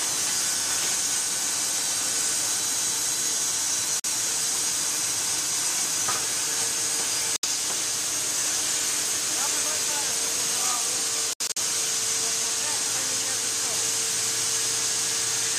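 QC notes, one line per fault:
2.60–2.97, 5.20–5.57, 9.47–9.85 and 13.75–14.12 s, chunks out of order: each time a block of about 186 ms plays one slot late, after the block that should follow it. Nothing goes missing, but the swap leaves three hard joins, so each spot sounds jumbled.
4.00–4.06, 7.36–7.45 and 11.33–11.58 s, Bluetooth dropout: the sound cuts to silence, then picks up further along as if it had kept playing. The first two holes last about 46 ms and 70 ms. The third is about 139 ms of gaps scattered over 230 ms, with the longest run about 70 ms. Packets most likely missed their slot on the wireless link.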